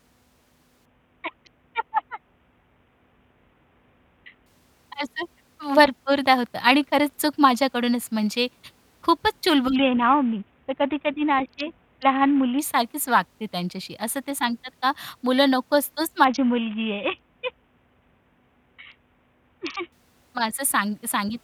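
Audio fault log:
0.85–4.46 s, 9.76–12.59 s, 16.24–19.92 s: Bluetooth SBC bit pool drop. In each span the treble goes dull and gritty noise rises over the speech, then clears. This fits the encoder cutting its bit pool from about 28 to 5, near 54 kbps, starving the upper sub-bands and coarsely quantising the rest.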